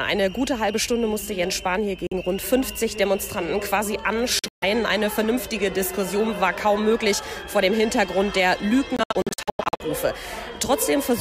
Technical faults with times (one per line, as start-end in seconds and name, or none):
2.07-2.13 Bluetooth dropout
4.39-4.64 Bluetooth dropout
8.96-9.82 Bluetooth dropout